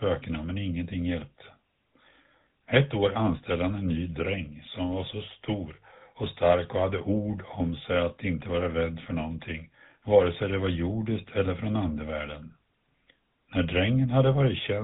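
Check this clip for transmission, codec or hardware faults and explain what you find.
One fault runs through the whole clip: the speech has passed through the GSM full-rate codec. The codec models the vocal tract and drives it with a sparse, regularly spaced pulse excitation, keeping only a third of the excitation samples. The damage is plainly audible as a buzzy, gravelly roughness, which points to the 13 kbit/s GSM full-rate scheme. Nothing is passed above about 3.8 kHz. A plain narrowband filter would dull the sound the same way but would leave the voice smooth, not rasping.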